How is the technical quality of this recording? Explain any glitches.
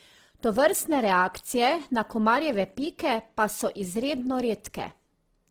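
The quality is held back by audible compression damage across the whole clip. Throughout, the speech sounds rough and grainy, with a noisy texture where the tones should be clean. This is likely Opus compression in its music mode. That mode keeps each band's energy but fills starved bands with folded or noise content. The damage fits a low rate around 16 kbps. The bandwidth stays wide, reaching about 20.2 kHz.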